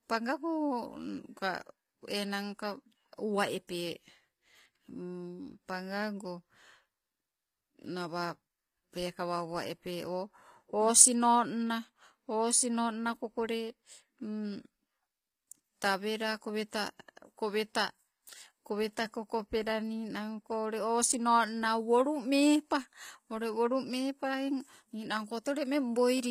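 Throughout, s sounds turn gritty and lispy and nothing passes 15.5 kHz, likely from HE-AAC compression rebuilding the treble by copying lower bands upward.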